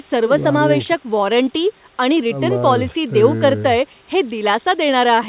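There are no technical faults to describe in this speech clip; it came through a WebRTC call path using G.711 A-law at 64 kbps, which leaves nothing above 4 kHz.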